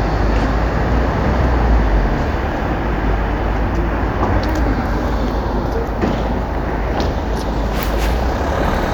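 No technical faults can be heard anywhere in the recording; the signal stays intact and steady throughout.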